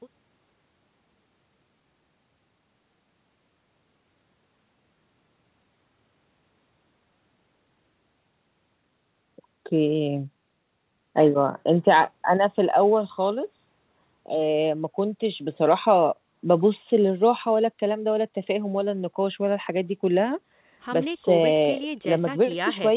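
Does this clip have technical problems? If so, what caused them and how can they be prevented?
No, nothing stood out as a technical problem on listening to this speech, so there is nothing here that needs preventing.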